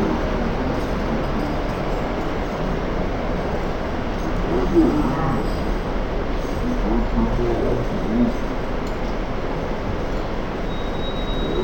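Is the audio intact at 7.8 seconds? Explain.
No, at 7.8 seconds you're hearing the stereo read as mono fault that runs through the whole clip. The interleaved left and right samples are being played back as one channel, so everything crawls at half speed, drops a full octave, and picks up a faint mirrored copy up top.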